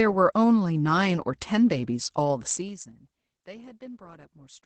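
Throughout, the speech sounds muffled, slightly hoarse and faintly robotic, with nothing above 8.6 kHz. This is Opus voice compression in its SILK wideband mode, coding the excitation coarsely at a low rate that fits roughly 12 kbps, so the codec damage is plainly audible.

From 2.5 to 3.06 s a rapid ticking, zipping texture rides on the speech as its level falls by about 20 dB. This is zipper noise: the drop is applied in unsmoothed steps of about 3 dB, roughly fifteen per second, each leaving a small click.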